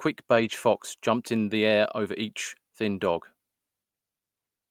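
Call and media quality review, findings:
Lost packet rebuilt from error correction, 0.35–0.49 s: brief rough, noisy patch with no gap, fitting about four lost 20 ms packets replaced by low-bitrate Opus FEC copies. Waveform stays continuous; spectrogram shows a smeared, grainier stretch.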